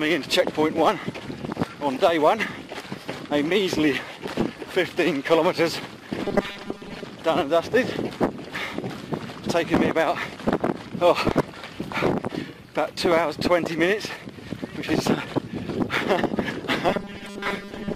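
Robotic sound from repeated short buffers appears from 6.24 to 7.04 s, with about half the audio repeated, and from 16.89 s to the end, with most of it repeated. A fixed 200 Hz buzz, likely from 5 ms buffer repeats, is imposed on the sound; unlike a crackle, it stays tonal.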